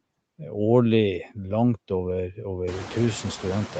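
Throughout the speech, the background falls away in the gaps and swells back under the speech, a pumping that grows plainer once the room noise climbs about 22 dB around 2.5 s. These are noise suppressor artifacts, from per-frame band attenuation of about 21 dB.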